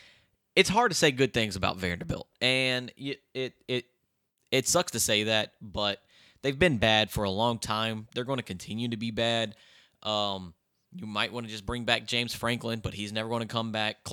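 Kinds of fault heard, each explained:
Nothing in this speech recording stood out as a fault on listening.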